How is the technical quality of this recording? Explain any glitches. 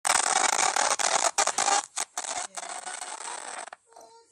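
One glitch stands out. From 1.66 to 2.65 s there is zipper noise. The level falls about 15 dB in unsmoothed 1 dB steps, roughly fifteen a second. Each step clicks, so a zipping tick rides on the sound.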